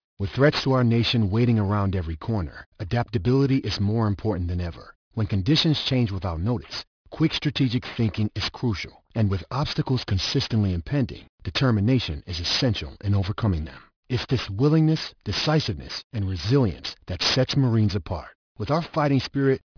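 Gritty, metallic sibilants run through this speech clip from start to finish, with the spectrum packed hard up to about 5.5 kHz: aliasing, from dropping 44.1 kHz to 11 kHz unfiltered, folding highs back at roughly 10 dB below the speech.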